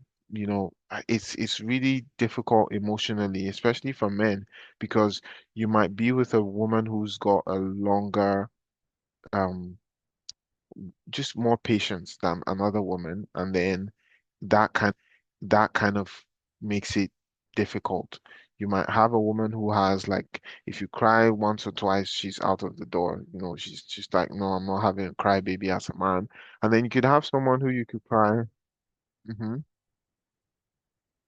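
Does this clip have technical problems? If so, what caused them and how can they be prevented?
Yes. At 14.91 s the speech jumps back and one second of it plays again, running to 15.91 s, with a small blip at the point of the jump. This is a stream segment repeated: the player fetched or queued the same one-second segment twice, so the same audio was placed in the playback buffer back to back and the programme grew by a second. Prevention: have the player track segment sequence numbers or timestamps and discard any segment already queued.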